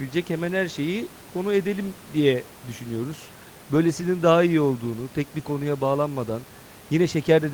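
Nothing in the system's handling of this speech clip goes wrong, and the only other thing you'll hear is the room's own background noise sitting about 21 dB below the talking.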